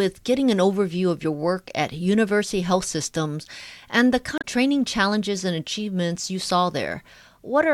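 At 4.38 to 4.45 s, between "and the" and "training challenges and achievements", damaged data in the compressed stream corrupts about 70 ms of speech. The decoder misreads frames there and resyncs, leaving a brief disturbance. A spectrogram shows a sharp-edged vertical block breaking the harmonic pattern.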